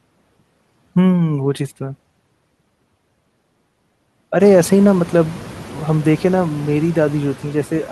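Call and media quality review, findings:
Noise suppressor artifacts, whole clip: steady noise pulled down about 12 dB between phrases and swelling back under speech. Spectrogram shows a patchy noise floor that darkens in pauses; waveform shows noise gating in and out around speech. Component: noise suppression stage, per-frame band gains. The room noise jumps about 18 dB around 4.5 s and then sits about 19 dB below speech.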